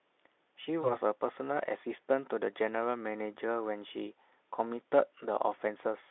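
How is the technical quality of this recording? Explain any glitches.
One glitch stands out in this speech, which is carried over a narrow telephone band of about 300 Hz to 3.6 kHz with faint or no audible Speex coding damage.

VoIP packet loss concealed by the speech codec, 0.81 to 0.97 s: one lost 20 ms frame was rebuilt by the decoder from the previous pitch and filter. The sound smears into a brief, fading buzz or coloured noise before clearing.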